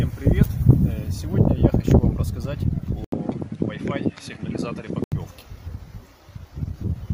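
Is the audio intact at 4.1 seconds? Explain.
No. From 3.04 to 5.12 s the input likely switched to a poorer device: an 80 ms gap, then duller audio with nothing above 11.4 kHz, roughly 10 dB quieter, with a new noise floor. The gap and changed noise separate this from a simple filter change.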